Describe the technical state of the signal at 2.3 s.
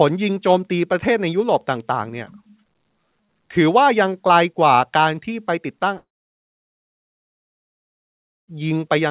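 At 2.3 s the speech is intact, with no fault present, just the narrowband sound of the call path, where nothing reaches above 4 kHz, which fits G.711 A-law coding at 64 kbps.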